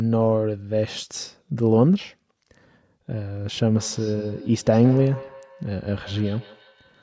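From 3.81 s, feedback echo between two devices: another device's playback re-enters the microphone, repeating it roughly every 150 ms, about 20 dB down.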